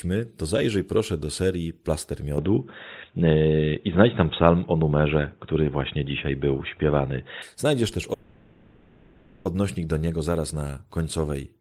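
At 2.38 s the recording likely switched to a poorer input device, and it stays on it until 7.42 s. The stand-in device passes nothing above 3.8 kHz, so the speech turns dull and boxy with no silence at the change. The level shifts by around 5 dB, and a faint new background noise appears about 40 dB below the speech. At 7.42 s the fuller sound returns just as abruptly.

From 8.13 s to 9.47 s there is a call audio freeze, likely caused by packets stalling in transit until the receiver's jitter buffer ran dry. With nothing new to play, the receiver stretched the last sound into a fading buzz or hiss that fills the whole 1.32 s without falling silent. When the packets arrived, playback resumed at "do niego zaraz na" with no speech lost, but everything after runs 1.32 s later than before.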